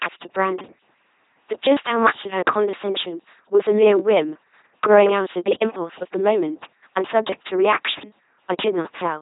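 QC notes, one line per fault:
Throughout, LPC-10 vocoder: heavy damage across the whole speech clip. The voice sounds buzzing and mechanical, like a robot. The coder keeps none of the original waveform. It sends only a crude filter shape, pitch, loudness and a voicing choice, then rebuilds each stretch from a pulse train or from noise. That synthetic source causes the buzz. Nothing is present above 3.8 kHz. The thin, coarse result fits a bitrate of around 2.4 kbit/s.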